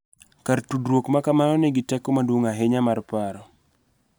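Speech recording, no technical faults detected on listening.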